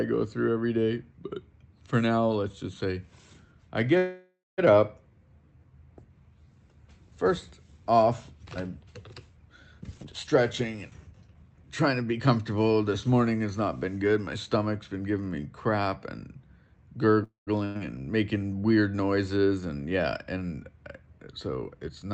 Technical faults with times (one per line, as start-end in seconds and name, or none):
3.97-4.60 call audio freeze
9.79-12.39 jitter buffer speed-up
17.24-17.49 call audio freeze
17.65-17.77 burst of packet loss
21.18-22.11 jitter buffer speed-up